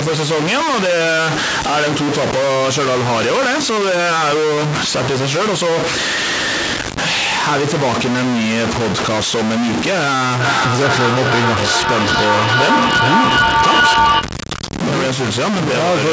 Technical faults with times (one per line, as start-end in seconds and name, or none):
0.00-16.12 stuck bit
10.40-14.36 feedback echo between two devices